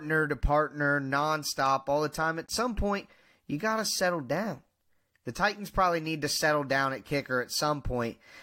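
At 2.46 to 2.48 s the speech drops out for 20 ms, just before "some point you got". This is a gap between stream segments. The time stamps of two 6-second segments leave a hole. The player fills it with silence, so the edges are abrupt.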